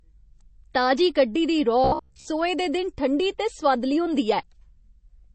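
Throughout, the speech has a watery, swirling texture on sibilants. That points to MP3 compression at a low bitrate, likely around 32 kbps. The swirl, not just any missing treble, separates it from a plain low-pass filter.

From 1.84 to 2.26 s, between "ताजी कड्ढी दी" and "दे दिन ठंडी ते", the voice turns into a rigid metallic buzz at 66.8 Hz. That is the robotic sound from repeated short buffers, likely a roughly 15 ms block replayed in place of most of the real audio. Unlike a dropout or stutter, there are no gaps or repeated syllables, only an imposed fixed pitch.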